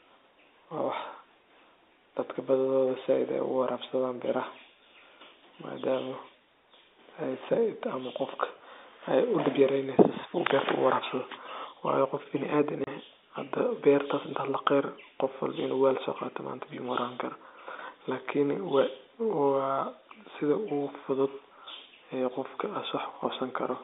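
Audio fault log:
12.84–12.87 s, packet loss filled with silence: a 30 ms hole with hard edges cuts the telephone-band speech, which fits one lost packet replaced by silence.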